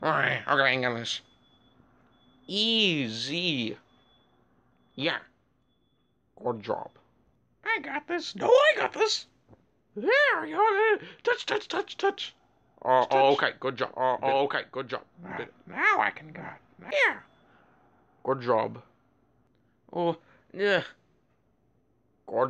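Doubled audio track, 13.01 to 16.91 s: a dry copy of the sound trails about a second behind, roughly 5 dB quieter and starting abruptly, likely from a slower duplicate capture path.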